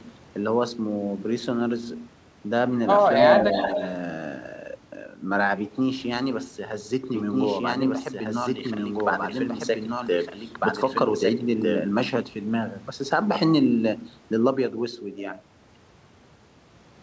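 From 3.35 to 3.84 s there's a short echo leak: a copy of the speech arrives about 281 ms late, only a few dB under the original. It's likely a far-end speakerphone whose echo canceller let some of its microphone pickup slip back into the call.

Then from 7.14 to 11.78 s you get a doubled audio track, a full-band second copy running roughly a second and a half behind at about the same loudness. It has no room colour and starts and stops abruptly, likely a second capture path or an edit holding two copies out of step.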